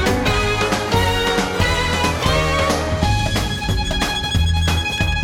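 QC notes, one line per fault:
Nothing to flag here; I heard no faults anywhere in the clip.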